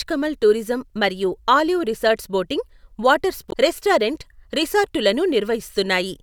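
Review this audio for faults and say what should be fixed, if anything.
Damaged data in the compressed stream, 3.49 to 3.54 s: corrupted bytes make the decoder misread frames and lose sync, leaving a brief garbled glitch in the speech. Store and transfer the stream with error checking, such as per-frame CRCs and verified copies, so corruption is caught before playback.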